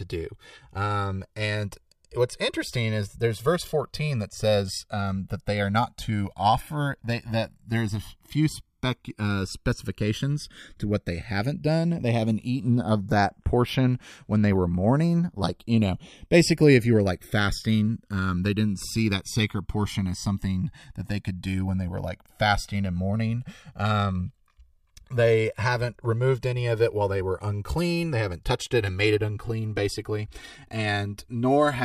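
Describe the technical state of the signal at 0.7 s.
Channels drifting apart at 0.7 s, across the whole clip: the channels run on separate clocks, so their delay slides toward about 3 ms, sweeping comb notches in mono as slow flanging.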